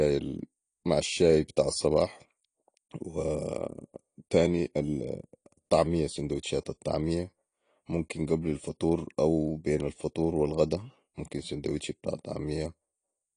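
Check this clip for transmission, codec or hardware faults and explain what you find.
One codec fault is present across the whole clip: AAC compression. The speech has nothing above 10.2 kHz and sounds dull and smeared, with fizzy, warbling sibilants. The cause is likely AAC-LC encoding at a low bitrate, consistent with about 32 kbps, where the encoder drops the top band and quantises the rest coarsely.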